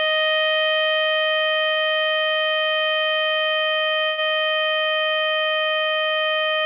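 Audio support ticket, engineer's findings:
Music held and smeared for a moment at 1.72 s, 2.23 s and 2.94 s, stretched by 45, 34 and 22 ms, with a faint buzz or dip. Short stall from a late packet: jitter buffer ran dry, receiver extended the last sound until data arrived, then resumed from the same point. Nothing lost, each event adds its own length to playout delay. Band-limited to below 4 kHz throughout, which fits a narrowband G.711-style call path.

4.06–4.20 s: sound freezes into a fading buzz or hiss for 112 ms, no full silence, then picks up where it stopped. Call audio freeze, likely packets held up in transit emptying the jitter buffer. Receiver filled the gap by continuing the last sound. No audio missing, gap inserted, delay up 112 ms.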